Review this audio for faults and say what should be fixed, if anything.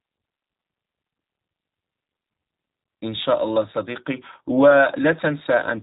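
The speech was carried through a G.729 codec for its whole length, squeezed to a rate that fits 8 kbit/s by modelling the voice with a vocal tract filter, a pitch predictor and a few pulses per frame. Everything above 4 kHz is gone, and the rebuilt voice sounds plainly rough and synthetic throughout. To prevent it, capture or route the audio through a wideband or lossless path instead of a narrowband VoIP codec.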